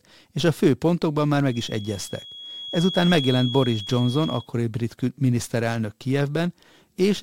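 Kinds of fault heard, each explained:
Feedback whistle: a thin, steady tone at 3.3 kHz sits behind the speech from about 1.45 s, just after "a fő pontokban már", until about 4.49 s, right before "brit miniszterelnök". It's quietish, roughly 15 dB under the talking, and wobbles a little in level without ever building up. That's the classic sign of a loudspeaker-to-mic loop likely hovering right at the edge of feedback, ringing on one frequency but not quite running away.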